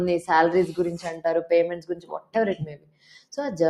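A noise suppressor built for speech is applied to these sounds throughout, treating steady parts as noise, so the level keeps swinging by roughly 15 dB and pumps, flutters or thins out. The suppressor cuts the sound from 1.77 to 2.35 s by about 17 dB, then again from 2.6 to 3.34 s by about 18 dB, so sustained parts sink or their tails get chopped.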